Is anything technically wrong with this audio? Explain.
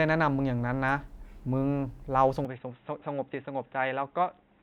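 Yes. At 2.45 s the input was likely switched to a poorer device, probably another microphone or a headset's call profile, and it stays there to the end. That device passes a narrower band, so from this point nothing reaches above 3.8 kHz. There is no gap at the change, but the speech turns dull and boxy at once, drops a few decibels in level, and picks up its own faint background noise well beneath the speech.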